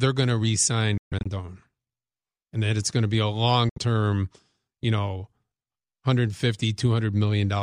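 At 0.98 s and 3.69 s the speech cuts to abrupt silence, likely a Bluetooth dropout from late packets. The first gap breaks up over about 0.28 s, and the second lasts 0.09 s. Speech resumes further on rather than repeating or stuttering.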